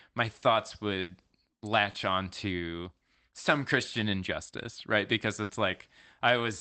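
Right after "my thoughts", around 1.01 to 1.11 s, there's a burst of packet loss. The receiver continues the last sound and fades it out, and about 80 ms of speech is gone. At 1.91 to 1.95 s, just before "onto some", a short concealed packet loss leaves a quick smear where 20 ms went missing. At 5.43 to 5.51 s, another burst of packet loss hides about 60 ms behind the same fading fill.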